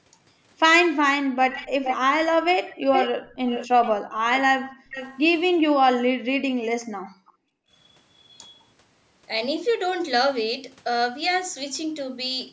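At 1.22 to 1.38 s the echo canceller clamps the microphone while the loudspeaker plays. This background gated by the echo canceller pulls the room sound down by about 40 dB, so the background briefly vanishes. From 1.51 to 1.97 s and again from 2.89 to 3.93 s, a copy of the sound returns 428 ms late, only about 5 dB below the original. It is most likely an echo leak, with the far side's canceller failing to remove its loudspeaker pickup. The same gating recurs at 4.03 to 4.19 s as a shallower dip of about 14 dB and at 4.63 to 4.89 s as a full drop of about 40 dB. A fainter 428 ms echo follows at 4.89 to 5.23 s, about 15 dB down. The longest gating runs from 6.84 to 7.73 s, dropping the room sound by about 40 dB for roughly a second.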